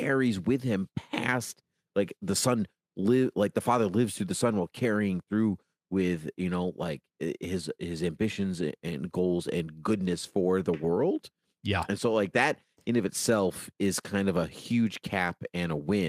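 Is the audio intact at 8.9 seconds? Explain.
Yes, the speech plays through cleanly at 8.9 seconds, with no dropout, click, distortion or other fault audible at that moment.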